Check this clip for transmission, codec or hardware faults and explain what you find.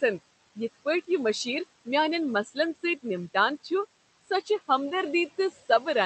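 Two processing faults from the noise suppressor are audible, over room noise sitting about 16 dB below the speech and a call codec path whose 8 kHz audio band fits Opus.

Noise suppressor artifacts, throughout: the suppressor pulls steady background down by about 16 dB between phrases, so the residue pumps, sinking between words and rising under them.

Speech cut by the noise suppressor, at 2.44–2.57 s, 2.75–2.84 s, 4.21–4.50 s and 5.51–5.69 s: treating quiet speech as noise, it drops those passages by about 9, 13, 18 and 13 dB, swallowing them.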